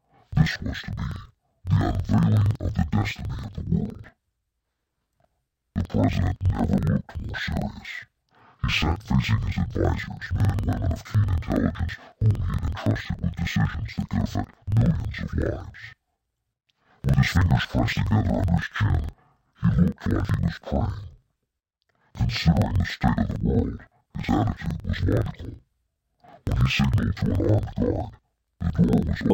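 From start to end, the audio is hit by interleaved audio read as planar. Alternating left and right samples are split into halves, each played at half speed. The sound drops an octave, doubles and chops at about 21.5 Hz. Blocks of 46.44 ms fit a 2048-sample layout.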